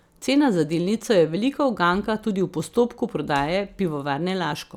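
No technical faults turn up at any point in this audio, so there is nothing to describe in time order.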